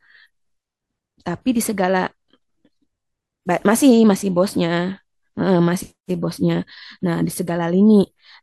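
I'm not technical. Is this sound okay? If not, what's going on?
Yes, nothing is wrong with this recording.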